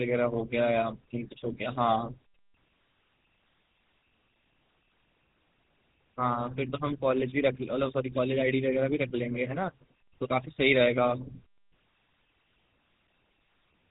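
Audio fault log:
Throughout: GSM full-rate codec, buzzy gravelly speech from pulse-driven vocal-tract modelling near 13 kbps, with nothing above 3.8 kHz, rougher than plain band-limiting.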